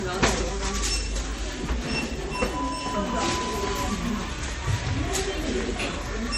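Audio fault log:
Throughout: transcoding between lossy codecs. Nothing above 16.3 kHz, with smeared, swirly artefacts of two different textures heard together, likely from low-bitrate MP3 re-encoded as Vorbis. The spectrogram shows a hard ceiling and patchy, blocky high-frequency gaps.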